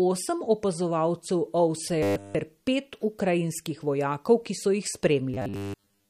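Throughout the speech the audio carries plainly audible MP3 compression, most likely from a low bitrate around 48 kbps. The treble stops sharply at 15.2 kHz, where the encoder gave up on the top band. Weak frequency lines drop in and out between frames, which gives a watery, swirling quality, and the bits starved of detail leave consonant edges smeared rather than crisp.

From 2.03 to 2.35 s, just before "ter pet ukrajinskih vojakov", the speech turns into robotic sound from repeated short buffers. The playback side likely ran short of fresh audio and filled the gap by looping a 10 ms slice. Essentially all of that stretch is repeated material, so a rigid 100 Hz metallic buzz runs through it. The same fault returns from 5.34 to 6.10 s with the same 100 Hz buzz, with most of that stretch looped rather than fresh audio.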